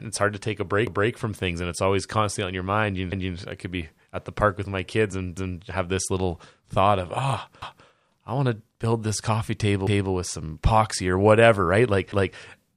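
Speech with an overlapping-chunks fault: at 0.87, 3.12, 5.37, 7.62 and 9.87 s, a 250 ms stretch of audio plays twice, producing a regular stutter roughly every 2.25 s. The audio was processed in 2.0 s blocks, and each new block begins a quarter-second before the previous one ended. Both blocks are played out in full, so the shared segment at every join repeats.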